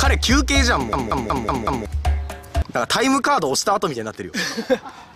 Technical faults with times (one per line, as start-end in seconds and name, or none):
0.93-1.86 system hang loop